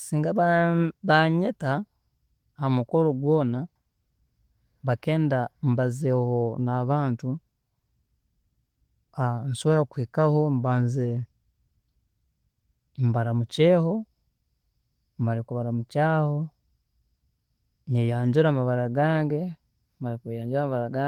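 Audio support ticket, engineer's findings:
No faults found on listening; no component implicated.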